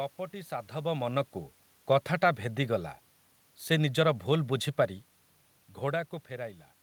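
Nothing technically wrong can be heard in this speech recording. The room's own background noise sits underneath throughout, and the level of the talker shifts around half a second in and again at about five and a half seconds, as a person moving relative to the microphone would cause.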